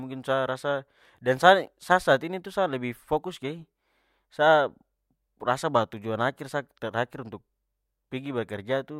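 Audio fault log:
Nothing wrong could be heard anywhere in this speech.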